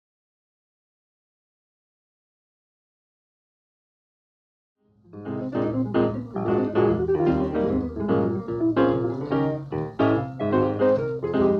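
No technical fault can be heard in this audio; its only level change is a smooth, editor-style fade-in that begins at around 4.5 s and reaches full level at 6.08 s, with no click or hard edge.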